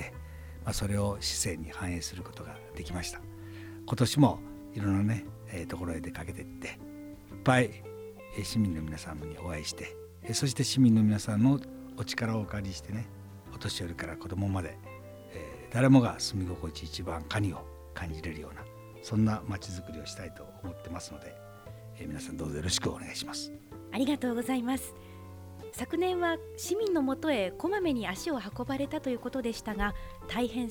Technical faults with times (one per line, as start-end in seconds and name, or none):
27.60 dropped samples